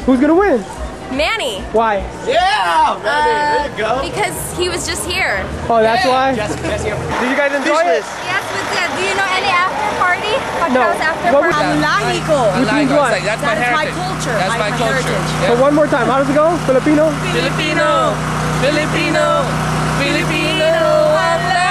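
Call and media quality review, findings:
No faults found in this recording.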